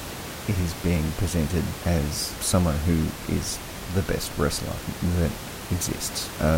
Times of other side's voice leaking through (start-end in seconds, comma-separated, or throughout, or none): none